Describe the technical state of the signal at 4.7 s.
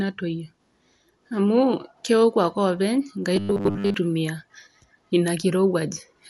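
At 4.7 s the speech is dull and band-limited, and a rough, fluttering noise clings to the voiced tones. This runs through the whole clip, not just this moment. The likely cause is Dolby Digital compression at a low bitrate, consistent with around 64 kbps. The encoder narrows the band and leaves many frequency lines without mantissa bits, which the decoder fills with dither noise. That grainy noise fill, rather than metallic warbling or a clean filter cut, distinguishes it.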